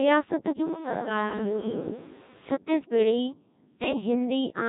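Throughout, the speech passes through the Codec 2 vocoder, with heavy damage that fits its 1.6 kbit/s mode. Only pitch, voicing, energy and a spectral envelope survive, and the decoder rebuilds the voice from sine waves, so it sounds robotic and buzzy.

From 3.84 to 4.01 s, bit errors on digital voice radio corrupt the vocoder parameters, at a bit error rate of around five percent across what sounds like about four frames. Pitch, level and tone colour jump abruptly, and the voice breaks into warbling, bleepy gibberish.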